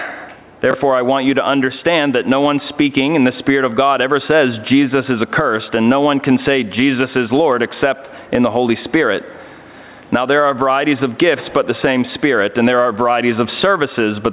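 Throughout, the level pumps, with the gain swinging by about 10 dB. This is gain pumping, likely from input gain set far too high and a fast limiter pulling it down, unlike a gate, which cuts the gaps. From 0.71 to 0.74 s, chunks out of order produce a brief jumbled moment: a 10 ms chunk plays two chunks late. Unlike a dropout, nothing is missing.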